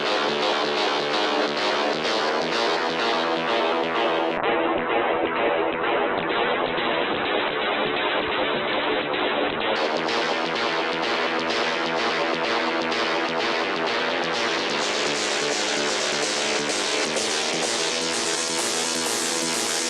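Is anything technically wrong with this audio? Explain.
Yes. From 4.38 s to 9.83 s there is a call bitrate drop. The connection's bandwidth estimate fell, and the encoder was pushed from a comfortable rate down to a very low one, which fits a drop from around 64 kbps to around 7 kbps. Starved of bits, it coded the sound coarsely and cut the audio band off at 4 kHz. For about 5.4 s the sound turns muffled and rough, with a watery texture, until the rate recovers.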